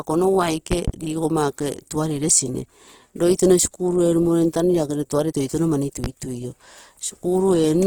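Throughout, the speech sounds grainy and rough, with noisy tones despite content reaching about 20 kHz, likely from Opus compression in its CELT music mode at a rate that fits roughly 16 kbps. Between 0.72 and 0.92 s two sharp pops land around 10 dB above the speech, and a single one follows at 6.04 to 6.08 s, just after "lagere tuare toitouno mani". These are loud pops, likely from a voltage step or pulse added to the signal.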